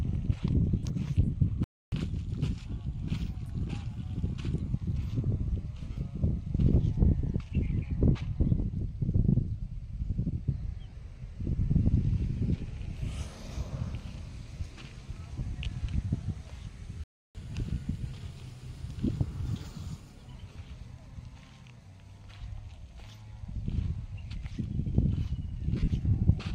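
At 0.78 to 0.83 s the sound turns briefly into a hissy, toneless smear for about 45 ms. These are lost LE Audio frames: the LC3 decoder fills the gap by repeating the last spectrum with scrambled phase, then fading it, and the gap fits roughly six 7.5 ms frames.

From 1.64 to 1.92 s the audio simply stops for about 281 ms, then resumes. This is a playback stall, likely the player running short of data or its thread being held up.

Right after, from 1.92 to 4.73 s, everything runs at 1.1 times normal speed and sits roughly one and a half semitones sharp before settling back. This is catch-up at higher speed, with the player resampling its backlog to recover the time lost in the stall.

The same smeared dropouts from lost LE Audio frames return at 5.92 to 5.96 s (about 38 ms) and 10.90 to 10.93 s (about 30 ms). A shorter one of about 15 ms comes at 15.40 s.

At 17.04 to 17.35 s there is a second silent playback stall of about 313 ms, likely from the same starved or blocked player. 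It is followed from 17.35 to 20.35 s by another catch-up at higher speed, again at 1.1 times speed and roughly one and a half semitones high.

A further lost-frame smear of about 30 ms falls at 20.52 to 20.56 s. The worst lost LE Audio frames come from 25.75 to 25.90 s, about 120 ms of missing audio scattered across 150 ms, with the longest run around 50 ms. That stretch sounds like a stuttering, noisy wash where the concealment fades toward silence before recovering.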